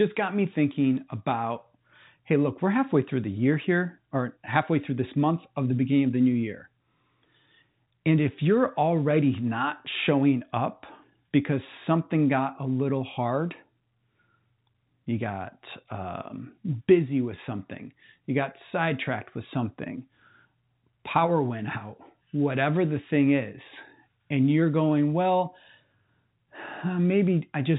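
No technical faults can be heard in the speech. It carries the sound of G.711 telephone coding, with nothing above about 3.8 kHz and any coding noise at most faint.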